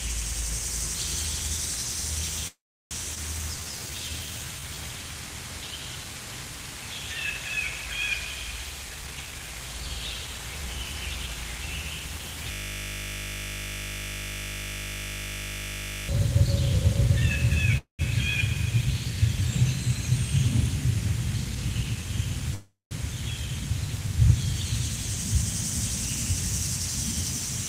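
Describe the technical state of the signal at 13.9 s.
At 13.9 s you're right in the middle of a system hang loop, which runs from about 12.52 to 16.09 s. The machine or its audio driver stalled, but the sound hardware kept replaying whatever was left in its ring buffer. Here that's a 20 ms slice looping exactly, 50 times a second, so instead of the real sound you get a steady, flat buzz at 50 Hz for those three and a half seconds.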